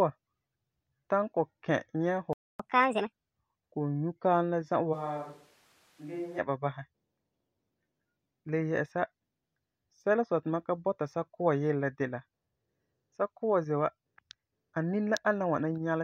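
At 2.33 s the speech drops out for 0.26 s in a playback stall, likely the player running short of data or its thread being blocked. From 2.60 to 3.12 s a catch-up at higher speed follows: playback runs at 1.5 times normal, pitch rises by roughly seven semitones, and both return to normal once the backlog is cleared. Between 4.95 and 6.38 s, starting just before "ba basɛ", the speech abruptly turns hollow and roomy, with thinner bass, a level about 10 dB lower, and room noise sitting roughly 30 dB below the speech. This is likely a switch to a distant microphone, with an equally abrupt return to the close one.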